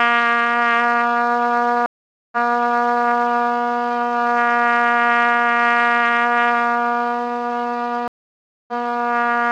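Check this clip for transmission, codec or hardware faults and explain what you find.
Two stream reconnects occur. At 1.86–3.06 s the sound drops out for about 0.46 s, then resumes 0.74 s earlier, replaying audio. At 8.08–8.73 s a 0.6 s gap is followed by audio roughly 0.4 s later, skipping material. Each time the connection broke and the player restarted its decoder mid-stream.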